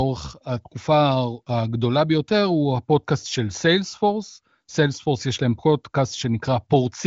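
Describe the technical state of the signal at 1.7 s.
At 1.7 s the speech is intact, carried through the wideband AMR-WB (HD Voice) path with no fault and nothing above about 7.6 kHz, at a high bitrate near 23 kbit/s.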